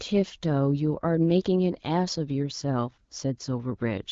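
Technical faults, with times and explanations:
No technical faults found; the speech shows the band limit near 7.6 kHz and light coding texture expected of the AMR wideband (HD Voice) codec, which fits a 12.65 kbit/s rate.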